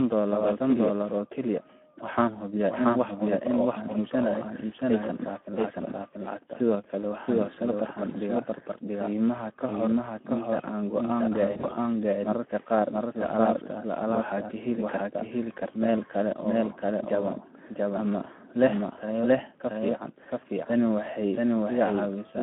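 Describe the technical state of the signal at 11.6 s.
At 11.6 s you're inside a stretch of VoIP packet loss concealed by the speech codec, running from about 11.51 to 11.74 s. The decoder lost packets and filled the gaps by extending its last pitch and filter at falling gain, so the speech smears into a fading, stretched sound and stays weak briefly afterwards. The gaps add up to about 100 ms scattered over roughly 200 ms, with no single run longer than 40 ms, which fits around five lost frames.

Underneath that, the whole line carries plainly audible Speex codec damage. The band is squeezed to 200 Hz to 3.4 kHz, and the starved excitation makes the speech hoarse and noisy, consistent with a bitrate around 11 kbps. That roughness colours the concealment too.

There's also a doubled audio track here: a second full-band copy trails the original by around 0.7 s at about the same level. It has no decay or room sound, so it reads as a clean, hard echo. 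The likely cause is a second, slower capture path mixed back in.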